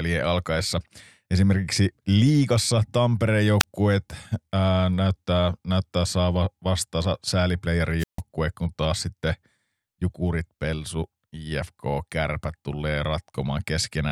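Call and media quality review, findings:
Wireless microphone squelch dropout, 3.59 to 3.63 s: short hiss burst, then about 22 ms of near silence. The RF signal fades and receiver squelch mutes the output. Spectrogram shows a thin broadband haze, then a narrow blank column.

Wireless microphone squelch dropout, 7.99 to 8.21 s: hiss rise, then about 150 ms mute before speech returns. Same receiver squelch action. Waveform shows a flat gap; spectrogram a wide empty band across all frequencies.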